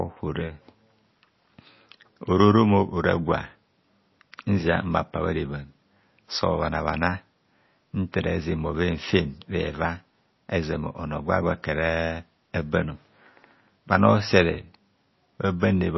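From start to end the speech has plainly audible watery, swirling artefacts and nothing above 5.8 kHz, likely MP3 compression at a low bitrate near 24 kbps. Unlike a simple low-pass filter, weak frequency lines flicker on and off between frames, and s sounds chirp.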